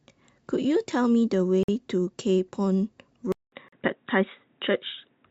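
A short speech recording with two kinds of fault. Gaps between stream segments cut in at 1.63–1.69 s (about 51 ms) and 3.68–3.72 s (about 40 ms), consistent with 2.0 s segments whose timestamps leave holes. On a waveform each is a flat, hard-edged strip of digital silence, and on a spectrogram a clean vertical blank band. No audio is lost, but everything after each gap is pushed later. From 3.32 s to the end the sound turns dull and boxy after a 200 ms silence, most likely because the input switched to a poorer device. The spectrogram shows energy stopping sharply at 3.8 kHz, with a faint new noise floor far below the speech and the loudness roughly unchanged.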